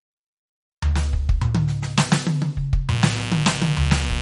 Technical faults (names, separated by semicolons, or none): MP3 compression; mains buzz